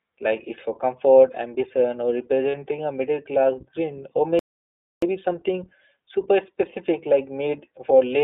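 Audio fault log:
Throughout: iLBC codec. The sound is confined to a narrow line band of about 250 Hz to 3.7 kHz. Nothing above that passes. Each 20 ms frame is coded on its own, leaving the speech plainly rough and synthetic. The coding fits a rate near 15.2 kbps.
2.50 to 2.55 s: lost iLBC frames. For 40 ms the decoder fills the gap by repeating the last pitch cycle mixed with noise. This gives a brief held, buzzy vowel, which fits two lost 20 ms frames. Clean speech returns at once, since frames stand alone.
4.39 to 5.02 s: playback stall. The sound stops dead for about 631 ms, then resumes. The output goes fully silent rather than smeared or repeated. The likely cause is the player running out of data or its thread being blocked until it recovered.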